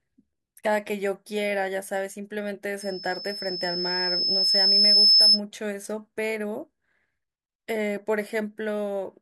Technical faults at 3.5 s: loudspeaker feedback squeal

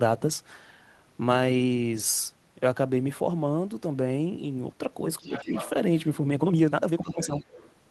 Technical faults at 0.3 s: none

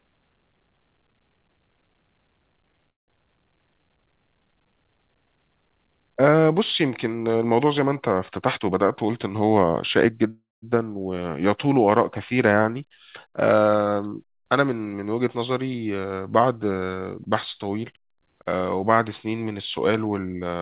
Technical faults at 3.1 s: call audio freeze

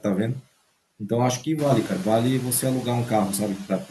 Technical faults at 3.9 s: noise suppressor artifacts; speech cut by the noise suppressor

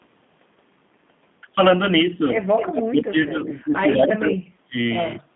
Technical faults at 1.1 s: G.729 codec

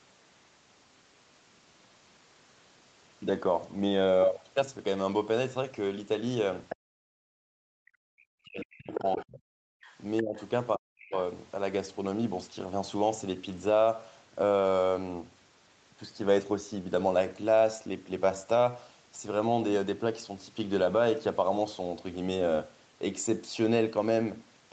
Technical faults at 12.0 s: none

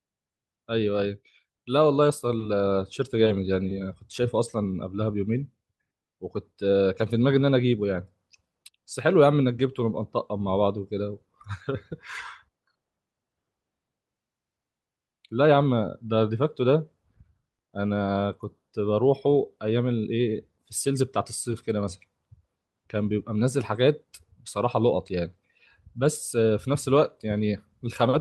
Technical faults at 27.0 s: none

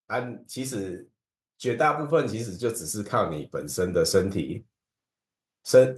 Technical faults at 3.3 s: automatic gain rising

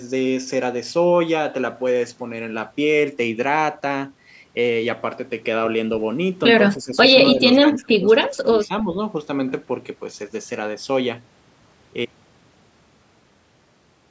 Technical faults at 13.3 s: none

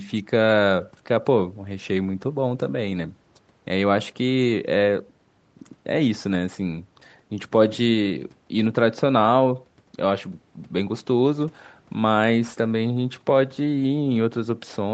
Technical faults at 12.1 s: none

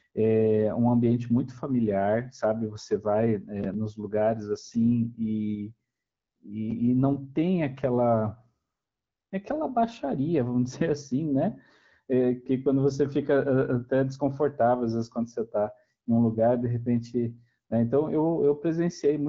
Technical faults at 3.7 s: none

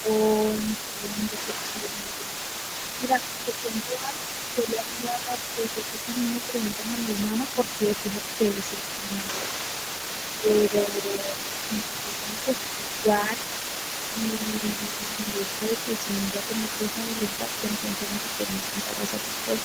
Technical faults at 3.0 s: other side's voice leaking through; speech suppressed in double talk

